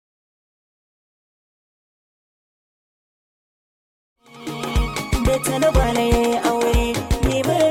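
No technical faults can be heard in the signal, and the only level change is a smooth, editor-style fade-in that rises from around 4 s to full level by 4.94 s without any click or hard edge.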